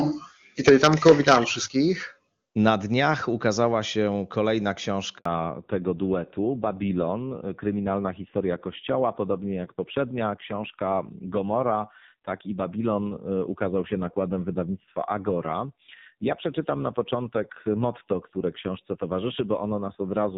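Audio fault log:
0.67–1.36 s, microphone overload: the loudest syllables here get a harsh, crackly edge because their peaks run about 7 dB past the converter's ceiling and the tops get sheared flat, a few percent of samples in all. Likely the mic input was simply set too hot.
0.69 s and 1.68 s, microphone volume stepped down: two sudden drops in level, about 2 dB and then about 6 dB, taking voice and background down together. Likely the call software reacting to the clipping by cutting the device's input gain.
5.17 s, handover gap: the voice dies away and there's 80 ms of silence while the call hops between networks and no speech frames arrive, so whatever was said in that moment is simply gone.
5.25–20.38 s, fallback to narrowband: right after the gap, the call drops from HD Voice at 23.85 kbit/s to narrowband AMR at 5.9 kbit/s. Nothing above 4 kHz survives, so the voice turns duller, and that low rate adds a rough, grainy texture too. 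The earlier wideband stretch showed little or no codec damage.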